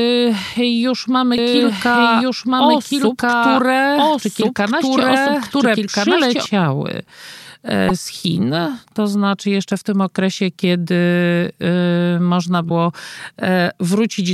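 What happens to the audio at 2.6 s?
At 2.6 s the speech is overlaid by a second copy of itself, a doubled audio track running from 1.38 s to 6.46 s. The copy trails by about one and a half seconds at roughly the same loudness, likely because the audio was captured a second time through a slower path. Unlike echo or reverb, there is just one full-band repeat with no decay or room colour, and it starts and stops abruptly.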